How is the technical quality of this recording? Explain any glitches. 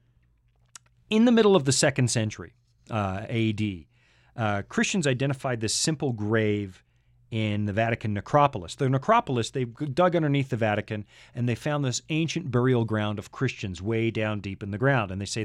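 No glitches or technical faults can be heard here.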